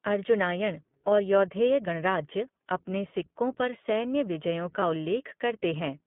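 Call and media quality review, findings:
iLBC codec throughout: narrowband, roughly 150 Hz to 3.5 kHz, rough synthetic texture plainly audible; fits iLBC's 15.2 kbps mode, 20 ms frames coded independently.

Lost iLBC frames, 4.80–4.83 s, after "सिक्कों पर सैन्य विजयों": brief held buzzy vowel from decoder repeating the last pitch cycle; fits one lost 20 ms frame; recovers immediately.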